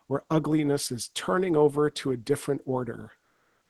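In this speech clip, the sender's voice detector likely stopped transmission after "over to a different", so from 3.21 to 3.70 s comfort noise replaces the real background with steady, featureless hiss, shifting the background level by about 6 dB.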